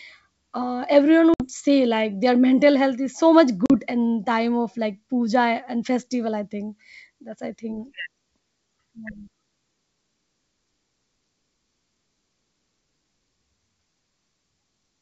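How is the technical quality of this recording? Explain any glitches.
Two brief glitches interrupt this G.722 wideband call at 64 kbit/s, both from packet loss on an ADPCM call. The first, at 1.34 to 1.47 s, comes after "uh everyone" and before "say like their mental": about 60 ms, a few packets, drops to hard-edged silence. The second, about 40 ms at 3.66 to 3.71 s, comes just before "in time of like". A plain gap would end cleanly. Here the speech returns with some distortion, because the decoder's adaptive predictor and step size have drifted from the sender's. It takes some tens of milliseconds to settle.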